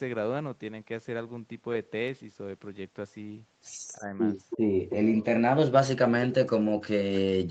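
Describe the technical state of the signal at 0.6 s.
At 0.6 s the speech is intact, with no fault, and the only things audible are the normal effects of the call microphone processing and the Opus call path, which leave nothing above 8 kHz.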